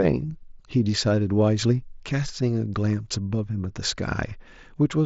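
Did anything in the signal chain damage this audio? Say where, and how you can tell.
No, nothing in the chain did any harm here; the speech simply sounds like it came over a Bluetooth headset link using mSBC, with its usual ceiling of about 7.7 kHz on the top end.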